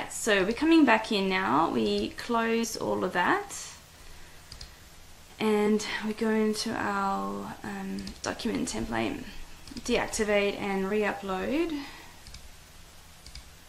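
The audio has compressed frames skipped at 2.63 to 2.65 s, where it jumps ahead by about two frames, roughly 50 ms of material gone. Unlike a dropout, there's no silent gap, just a jump across the missing stretch.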